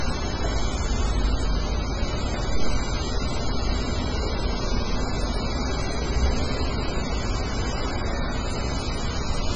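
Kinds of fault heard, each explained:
MP3 compression: Nothing is heard above 9.3 kHz, a hard ceiling on the treble. Weak detail flickers in and out, leaving a heavy, watery, swirling texture throughout. This fits a very low bitrate near 16 kbps, likely from MP3 encoding.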